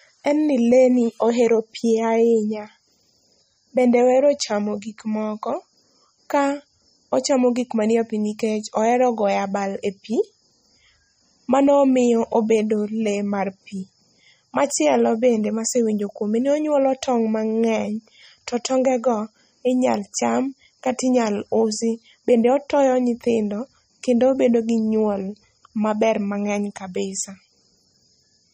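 MP3 compression, throughout the clip: nothing remains above 15.2 kHz, and the speech carries a plainly audible watery, swirling texture with chirpy s sounds. The likely cause is an MP3 encoder starved of bits, fitting roughly 32 kbps, zeroing weak frequency lines frame by frame.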